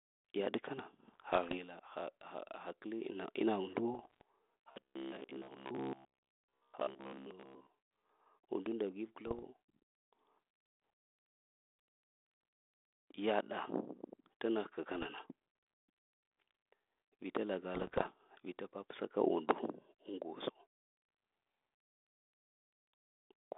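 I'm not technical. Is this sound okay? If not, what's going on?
No. Two separate problems can be heard in this phone-quality speech.

The first is bit errors on an ADPCM link, the kind of digital phone connection a cordless handset uses. Some of the data gets corrupted, and the decoder is thrown off for a moment, so you hear pops, rough crackly bursts and sudden small jumps in loudness. This happens five times: 1.08 to 1.58 s (right after "yaɗ kana", ending before "ha ha"), 3.94 to 4.21 s, 9.27 to 9.45 s (just after "undu nda v"), 14.94 to 15.07 s, and 17.74 to 18.08 s (just before "vita papsa ka undu"). Each is short and irregular, not a steady tone.

The second is robotic sound from repeated short buffers, from 4.72 to 7.70 s. Here the sound turns into a stiff, metallic drone at a fixed low buzz of about 67 per second. That buzz matches a tiny slice of about 15 ms being replayed over and over while much of the real audio is skipped, likely because new audio was reaching the playback software too slowly. 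Unlike the scattered pops of the bit errors, this is one continuous stretch with a steady mechanical hum.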